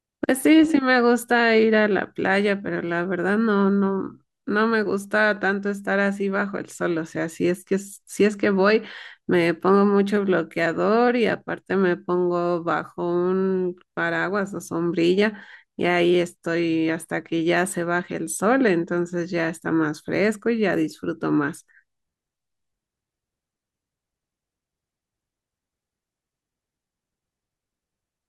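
Nothing stood out on listening to this speech recording.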